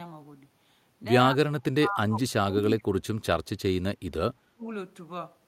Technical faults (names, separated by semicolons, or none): speech suppressed in double talk